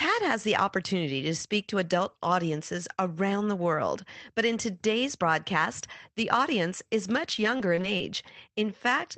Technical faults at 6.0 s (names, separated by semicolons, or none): none